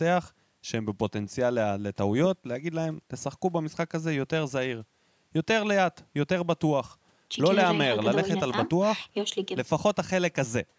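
No faults are present in this speech: the signal shows only the expected shaping of a call's microphone processing, with the lowest bass trimmed by its high-pass filter and no content above 8 kHz.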